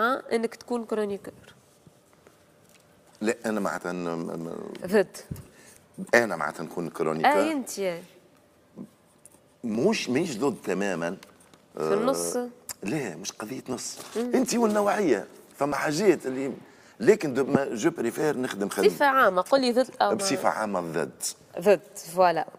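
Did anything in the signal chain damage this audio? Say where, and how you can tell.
Yes. Overlap between stream segments at playback: tiny skips at 1.79, 5.77, 9.75 and 15.72 s, each a skip of a few milliseconds, spaced on the 2 s segment grid. Adjacent segments carried overlapping time stamps, so the player discarded real audio and the waveform jumps.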